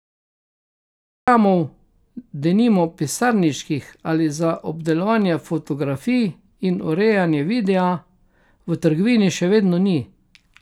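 The recording started late, a cut-off start: digital silence runs until 1.28 s, then speech begins abruptly mid-sound, with no natural attack.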